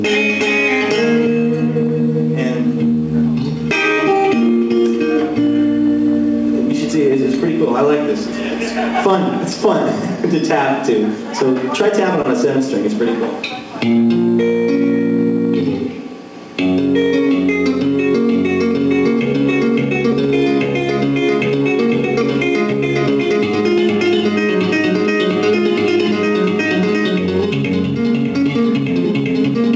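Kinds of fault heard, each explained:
Short concealed packet loss: about 20 ms went missing near 12.22 s, and the receiver patched the gap by extending the preceding sound, leaving a brief smear.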